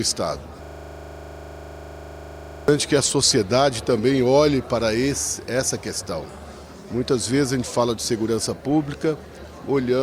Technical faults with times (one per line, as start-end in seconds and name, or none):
0.64-2.68 system hang loop